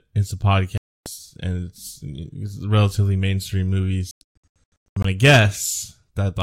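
Speech with silent holes from 0.78 to 1.06 s and, scattered, from 4.11 to 5.05 s, where about 0.65 s goes missing in gaps of up to about 0.12 s. This is likely a Bluetooth dropout. The speech resumes as if it had played on, so sound is skipped rather than delayed, unlike a stall.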